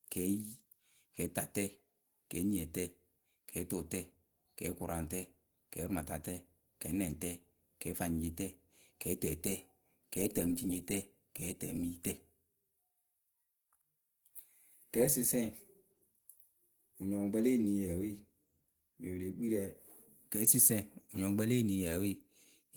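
Opus compression throughout: the speech sounds plainly muffled, hoarse and grainy, likely from hybrid-mode encoding squeezed to a rate near 16 kbps, with content still reaching 20.2 kHz.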